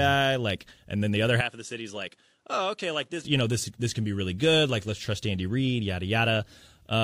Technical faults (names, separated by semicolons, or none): input switched to a poorer device